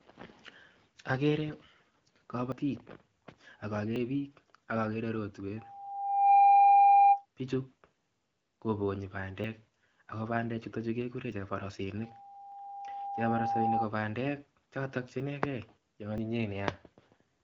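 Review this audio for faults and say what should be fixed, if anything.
Loudspeaker feedback squeal runs from 5.56 to 7.26 s: a microphone is hearing its own loudspeaker, and at 801 Hz the loop gain passes one, so that tone swells over roughly 0.7 s to around 15 dB above the speech. A spectrogram shows a single bright horizontal line at 801 Hz, thickening as it grows. Lowering monitor gain, moving the microphone off the speaker's axis, or adding a notch or feedback suppressor would prevent it.

Small jumps forward in the speech occur at 2.52, 3.96 (just before "biik ak"), 9.44, 11.32, 12.52, 15.2 (just after "bandek chotok che") and 16.18 s, each skipping roughly 20 to 70 ms. This is likely a dropped buffer (overrun): samples were overwritten before being read, so the two sides join directly. The waveform shows an abrupt discontinuity with no gap, and the spectrogram shows a thin vertical broadband line. 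Larger buffers or higher priority for the capture thread would stop them.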